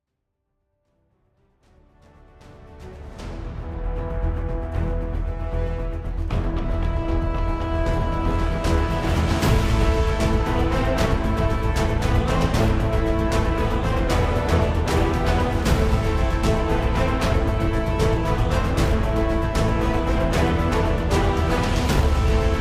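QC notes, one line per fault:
No faults found in this clip. A smooth fade-in brings the level up gently from the opening to full at 4.17 s, with no click or hard edge.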